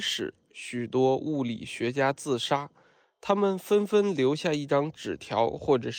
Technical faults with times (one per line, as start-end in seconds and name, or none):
none